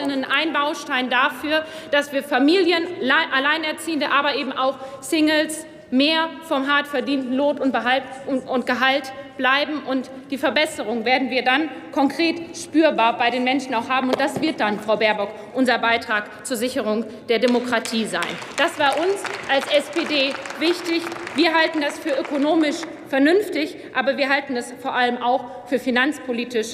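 No technical fault can be heard anywhere in the signal.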